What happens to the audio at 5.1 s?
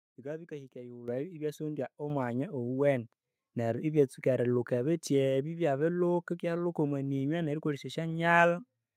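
Nothing goes wrong at 5.1 s; the speech runs through that moment intact, with no dropout, click or distortion.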